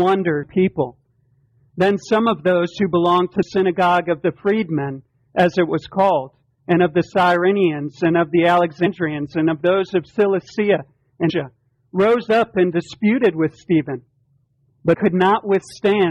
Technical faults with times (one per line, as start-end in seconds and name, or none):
0.42 damaged data in a compressed stream
3.42 damaged data in a compressed stream
8.85 damaged data in a compressed stream
11.29-11.31 damaged data in a compressed stream
14.93 damaged data in a compressed stream